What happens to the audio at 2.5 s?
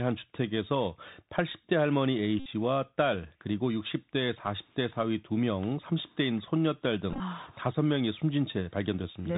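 Just before 2.5 s, from 2.40 to 2.48 s, a Bluetooth headset packet repeat occurs. Lost packets were replaced by re-decoding the previous one every 3.75 ms, producing a steady buzz near 267 Hz. That fits about sixteen lost packets. Across the whole clip, the Bluetooth CVSD headset codec limits the speech to below 4 kHz, making s sounds scratchy over a granular hiss, which points to a 64 kbps stream.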